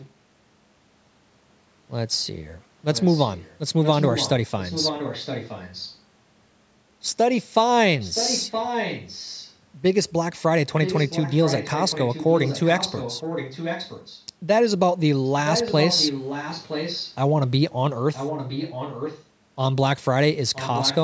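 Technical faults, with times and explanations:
0.0–0.1 s, 2.94–5.96 s, 7.99–9.55 s, 10.84–14.24 s, 15.24–17.17 s, 18.13–19.24 s and 20.53–21.04 s, echo leak: a faint-to-strong copy of the speech returns 967 ms after the original, barely audible at the start but close to the direct level around 8–9 s and 15–17 s. It is likely a far-end loudspeaker feeding its microphone past an incomplete echo canceller. Unlike room reverberation, this is a distinct repeat with a fixed delay, not a smooth decaying tail.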